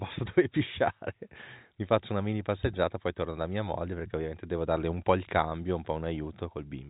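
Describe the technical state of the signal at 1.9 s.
At 1.9 s the speech is intact, carried by ordinary G.711 telephone coding, so nothing above about 3.8 kHz comes through.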